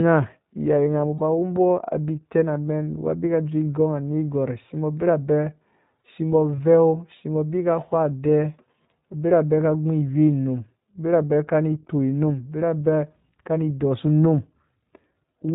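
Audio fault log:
throughout: iLBC codec, narrowband speech, slightly rough and synthetic, fitting a 15.2 kbps, 20 ms mode; the spectrogram shows a hard ceiling at 4 kHz.
1.14–1.20 s and 6.56–6.59 s: lost iLBC frames, 60 ms and 20 ms gaps concealed by a repeated pitch cycle, heard as a held buzzy vowel; the spectrogram shows flat, frozen harmonics with clean recovery.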